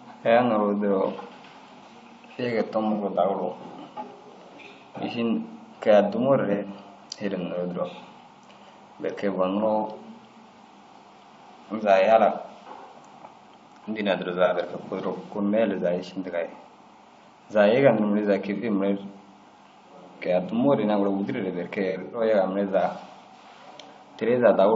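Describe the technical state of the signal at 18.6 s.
AAC frame loss with concealment occurs from 18.56 to 18.64 s. The decoder patches the gap from the last good spectrum, giving a brief smeared, noisy patch. Underneath, the speech has a rough, grainy texture throughout, likely from low-delay AAC compression at around 32 kbps, whose short frames resolve harmonics poorly.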